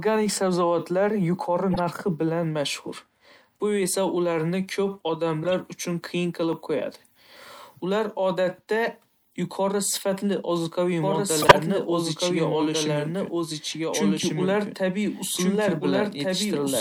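At 1.71 s a short squeaky blip lasting under a tenth of a second cuts through the speech, peaking around -15 dBFS. A similar, somewhat quieter chirp follows from 5.43 to 5.54 s, just before "uchun qiyin qilib". These are corrupt frames that were decoded anyway. Flipped bits in the compressed data made the decoder misread gains and spectral codes, so energy landed at the wrong frequencies for a handful of consecutive frames each time.

From 11.02 s, right after "yuqori sifatli ozuqaviy", the speech is joined by a second copy of itself about 1.5 s behind, roughly as loud as the original. It has no decay or room colour, it starts abruptly, and it runs to the end of the clip. This doubled audio track likely comes from the same signal being captured again by a slower path and mixed back in.

Inside that stretch, from 11.42 to 11.61 s, comes the worst corrupt frame decoded. It is a harsh burst of noise and squeak, the loudest of the three errors, spread over several frames.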